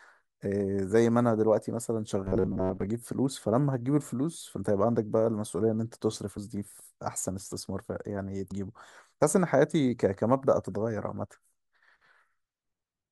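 From 2.22 to 2.87 s the speech turns into a rigid metallic buzz around 94 Hz: robotic sound from repeated short buffers, likely with roughly half the audio being repeated chunks. At 8.50 s there's a quick blip from damaged data in a compressed stream, where the decoder stumbles and resyncs.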